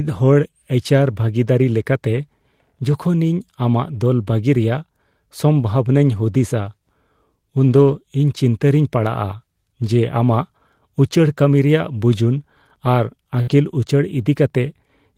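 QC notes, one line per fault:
2.91–2.97 s, 6.11–6.17 s, 7.63–7.93 s, 10.31–10.33 s, 13.49–13.51 s, lost packet rebuilt from error correction: brief roughened, grainier stretches with no gap in the sound, about 40 ms, 40 ms, 160 ms, 20 ms and 20 ms long, the 7.63 s one clearly the longest. Lost packets were replaced by the lower-bitrate backup copy carried in the following packet (Opus in-band FEC), so the audio continues but is coarser and noisier in those spans.
13.41–13.49 s, burst of packet loss: the sound stalls into a held, fading continuation of what came just before, then resumes further on, with about 60 ms of audio gone. A short run of consecutive packets never arrived in time, so the receiver extended and faded the last sound over the gap. The rebuilt stretch at 13.49 s follows directly, so the recovery itself is rough.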